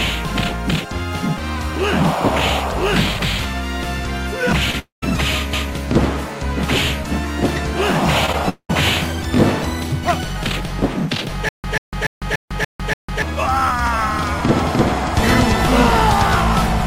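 The audio has brief concealed gaps, two longer dropouts and a stutter. Short concealed packet loss occurs at 4.71 to 4.75 s, 8.26 to 8.30 s and 8.32 to 8.35 s. About 20 ms went missing each time, and the receiver bridged it with a brief smear. At 4.79 to 5.04 s and 8.49 to 8.71 s, the sound fades into a synthetic continuation and then drops to silence for about 0.14 s and 0.08 s. This is likely a long network dropout. From 11.49 to 13.22 s, one 0.14 s burst repeats six times every 0.29 s, with 0.15 s of digital silence between repeats. This stutter with silent gaps likely comes from a stalled stream.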